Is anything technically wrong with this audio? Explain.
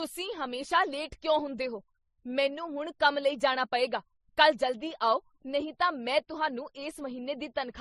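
Yes. Throughout this speech clip, the sound carries a stacked mix of compression artefacts, and the likely cause is transcoding between lossy codecs. It sounds like it went through low-bitrate MP3, then AAC-LC, then MP3 again. Each pass spends its bits re-encoding the previous one's smearing and swirl while adding its own, so the different artefacts pile up together. The top end stops dead at about 12.1 kHz, the lowest cut-off in the chain.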